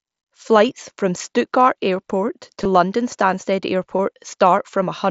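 At 2.64 s and again at 3.98 s there are brief concealed Bluetooth headset packet losses, about 15 ms and 7.5 ms long, which fits two lost packets and then one. The receiver fills each hole by repeating the best-matching piece of the preceding waveform, so the sound runs on at full level and the single lost packet is nearly hidden. Unlike a plain dropout, there is no silence or click, and the mSBC headset link's wideband sound carries straight through.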